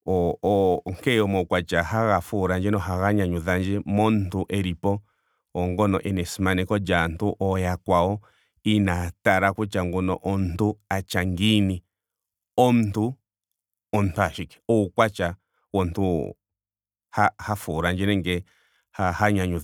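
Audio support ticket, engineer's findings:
Hiss and roughness riding on the speech, 0.00–1.50 s, strongest on loud and bright sounds, gone in pauses. Sample clock jitter in the converter: a clock wandering by a few microseconds mistimes samples on steep slopes, error around 35 dB below signal.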